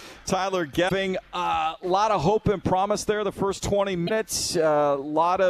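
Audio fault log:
0.85 to 0.92 s and 4.04 to 4.11 s, damaged data in a compressed stream: each time, about 70 ms of corrupt frames make the decoder misread its data and hunt for the next valid header, producing a short glitch.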